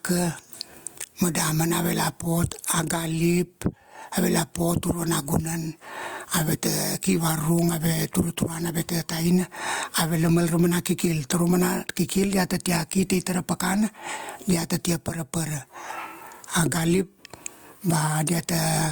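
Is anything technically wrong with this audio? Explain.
Yes, gain pumping runs through the whole speech clip. The level is squashed, with loud and soft parts pulled closer together, a gain swing of around 20 dB, likely from gain set far too high with a fast limiter clamping it.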